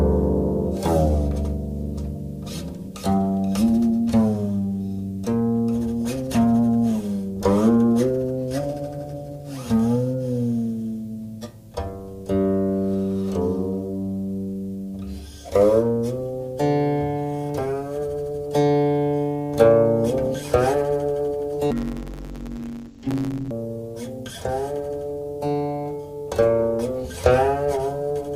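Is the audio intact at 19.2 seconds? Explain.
Yes, at 19.2 seconds the audio is intact, with no dropout, click, distortion or other fault at that point.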